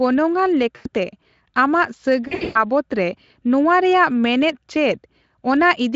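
Speech, carried over a Speex-coded VoIP link whose light coding roughness fits a setting around 24 kbps, is twice broken by VoIP packet loss concealed by the speech codec. At 0.75 to 0.88 s about 100 ms of audio is missing. From 2.27 to 2.64 s some 240 ms is lost in bursts over roughly 280 ms, the longest run 120 ms. The decoder fills each gap by repeating its last pitch and spectral shape at falling gain, which fits 20 ms frames. The result is a stretched, smeared sound that fades, and the sound stays thin for a moment after audio resumes. A plain dropout would leave silence or a click instead.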